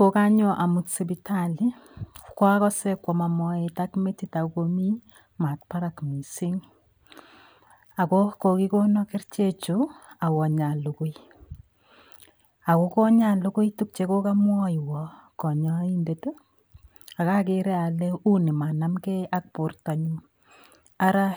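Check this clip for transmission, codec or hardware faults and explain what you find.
One fault runs through the whole speech clip: channel delay (comb filtering). One channel arrives a few samples late, around a tenth of a millisecond, and when both are summed to mono their shared content cancels at evenly spaced frequencies, the first near 5 kHz. The speech sounds hollow and dulled in the upper range. A spectrogram shows a fixed dark notch band around 5 kHz for the whole duration. The waveform looks normal.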